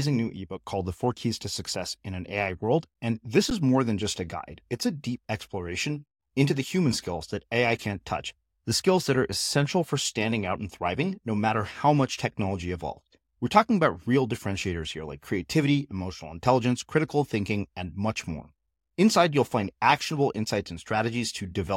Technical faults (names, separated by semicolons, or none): underrun with held sample